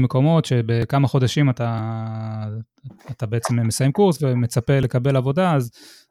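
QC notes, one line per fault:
0.82 s, 3.44 s, 4.83 s, dropped buffer (overrun): each a small forward jump, roughly 10 ms of speech missing and the two edges butted together with no gap, likely from samples overwritten before being read.
1.79 s, dropped buffer (overrun): a larger skip, around 40 ms gone, so the speech lurches ahead.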